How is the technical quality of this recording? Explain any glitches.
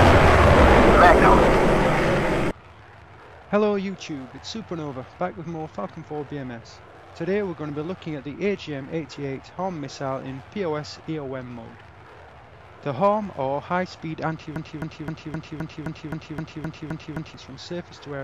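The recording has one glitch near the end. From 14.56 s to 17.34 s a broken-record loop occurs: a 0.26 s fragment repeats exactly, back to back, 11 times. This likely comes from a stalled player, encoder or stream resending its last buffered piece. The audio that should have filled that span is lost.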